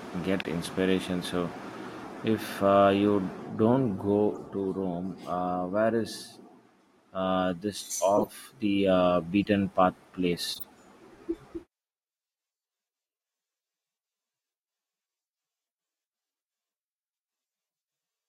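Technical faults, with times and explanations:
0.39–0.45 s, 1.54–1.57 s, 4.32–4.38 s, 8.17–8.27 s, 9.43–9.45 s, 10.54–10.64 s: corrupt frame decoded. Brief chirps and noise blips cut into the speech. The loudest are at 8.17 s, between "uh this" and "the uh", peaking near about −10 dBFS, and at 0.39 s, near about −15 dBFS. The rest are fainter, around −25 to −35 dBFS. Flipped bits in compressed frames were decoded anyway, so misread gains and codes put energy at wrong frequencies for a few frames each.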